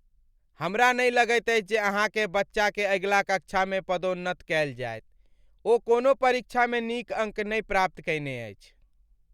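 A speech recording with no technical faults to report. Nothing heard in the audio points to a problem in how it was captured or delivered.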